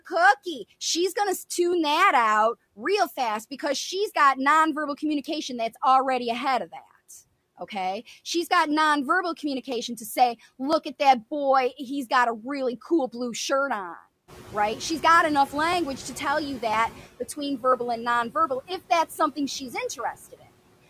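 Noise suppressor artifacts run through the whole clip. The suppressor pulls down each frequency band it judges to be steady noise, frame by frame, here by about 16 dB. The background drops away in the pauses and comes back up under the speech.

Periodic USB or driver dropouts begin at 0.73 s and repeat every 1.0 s until 20.72 s. That makes about twenty events. Each time, a tiny slice of audio, well under a millisecond, is skipped outright. A background task is stalling the USB bus or the audio driver on a fixed schedule. The result is a small, evenly spaced tick. It is heard only while sound is present.

The noise suppressor is catching up from 14.27 s to 17.07 s. Near 14.5 s the room noise jumps by about 15 dB. It settles about 19 dB below the speech. The suppressor's noise estimate trails behind that jump. For roughly 2.8 s the reduction is only about 11 dB. The louder background comes through with less reduction at first. 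It then sinks gradually as the estimate adapts to the new level.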